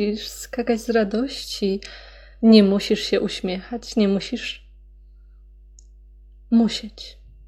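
Mains hum at 50 Hz runs under the speech the whole way through, a steady low drone sitting roughly 25 dB down, probably from a ground loop or nearby transformer.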